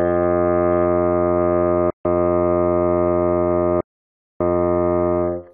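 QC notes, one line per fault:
1.90 to 2.05 s and 3.81 to 4.41 s, Bluetooth dropout: packets likely failed to reach the headphones in time and were discarded, so the music cuts to silence for about 145 ms, then 595 ms, and resumes further along, as though it had kept playing underneath.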